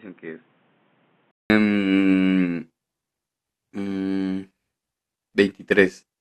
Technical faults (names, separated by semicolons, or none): input switched to a poorer device